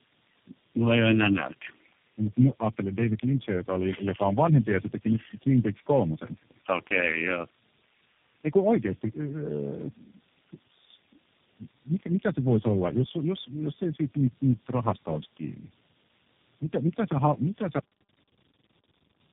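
Speech passed through a chain of separate telephone links, each with its own speech codec, so it was decoded and re-encoded at every hand-over. This is tandem speech coding, with what sounds like four speech coders in a row ending on something like G.729A. Each stage re-models artefacts the previous one left behind, so the errors compound: the speech comes out rough, dull and warbly, and nothing is left above 3.6 kHz. Near the end, the final buffers were never played out, giving a cut-off end. At 17.79 s the audio stops in the middle of a sound and falls straight to digital silence with no natural decay, and that silence runs for the remaining 1.5 s or so.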